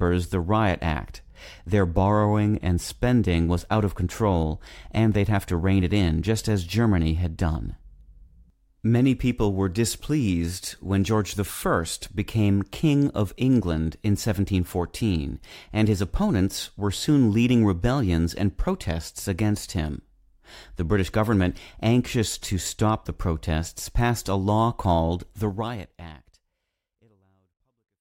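There are no technical faults to describe in this speech, which simply ends with a smooth fade out over its final few seconds.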